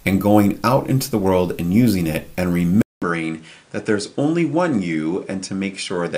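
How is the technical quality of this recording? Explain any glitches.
An input switched to a poorer device at 2.82 s, and the change lasts to the end. After a gap of about 0.2 s, the sound returns duller and boxier, with nothing above 9.8 kHz. It is roughly 5 dB quieter and sits over a new, faint background noise about 35 dB down. The likely cause is the system moving capture to a different, narrower-band microphone or headset profile partway through the recording.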